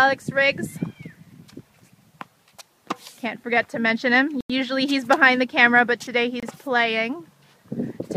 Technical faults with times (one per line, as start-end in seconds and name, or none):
4.41-4.50 Bluetooth stall
6.40-6.43 Bluetooth stall